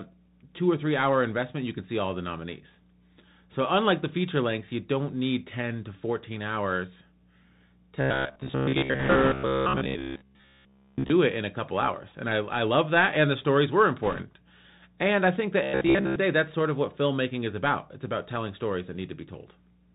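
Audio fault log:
throughout: Bluetooth CVSD headset codec. The audio has passed through the narrowband headset codec, whose character fits a 64 kbps CVSD stream sending one up-or-down bit per sample with an adapting step size. Nothing above 4 kHz survives, so the speech is muffled and boxy. Loud, bright passages outrun the step size and distort, s sounds come out scratchy, and a granular hiss sits under the whole clip.
8.01 to 11.10 s and 15.63 to 16.16 s: robotic sound from repeated short buffers. Fresh audio seems to stop arriving in time, and the gaps are likely filled by replaying the last short chunk, while most of the real signal in these stretches is skipped. The repeats lock a steady buzz at 66.8 Hz onto the speech, which points to a chunk of about 15 ms. The speech turns rigid and metallic and only loosely follows its original shape.
8.99 to 9.33 s and 14.03 to 14.22 s: bit errors on a Bluetooth voice link. 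Bits were flipped on the headset link, at a rate of around 5 percent in the first burst and around 3 percent in the second. In CVSD every bit carries the same small step and its effect fades quickly, so the errors cause no sharp clicks. Instead, a rushing, crackly noise spreads over the speech, heavier in the first burst, which falls inside the robotic stretch.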